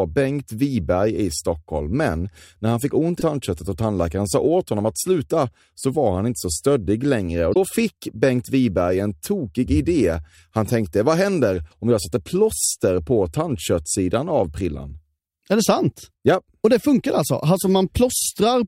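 A short glitch cuts in at 3.18 to 3.23 s, after "när han fick ont" and before "och tandläkaren sa åt", and again at 7.51 to 7.57 s after "inte så stöddig längre". Both come from damaged data in the compressed stream, where the decoder misreads corrupted frames and loses sync.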